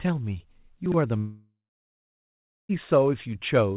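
From 0.86 to 0.94 s, chunks play out of order. One 20 ms chunk arrives three chunks late and plays after audio that should follow it. Nothing is lost. The jumbled order and three hard joins make a brief garbled stutter.

At 1.18 s the sound turns into a buzzing continuation that fades away, then about 1.1 s of silence follows. Sound returns at 2.71 s, with roughly 1.5 s missing. This is likely a long network dropout, with the receiver padding the gap. Throughout, the audio stops at 4 kHz, which fits a G.711 A-law call path.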